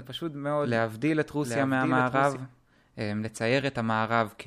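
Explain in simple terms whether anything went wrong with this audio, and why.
From the very start until 2.36 s there's a doubled audio track: a quieter copy of the same speech trails about seven-tenths of a second behind, then cuts off abruptly. It's likely a second recording path or an editing overlap.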